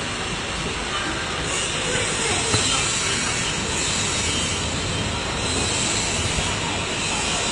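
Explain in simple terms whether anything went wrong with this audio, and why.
Throughout, the audio sounds dull, with nothing above 11.3 kHz, likely from transcoding between lossy codecs: Vorbis, then HE-AAC, stacking both codecs' artefacts.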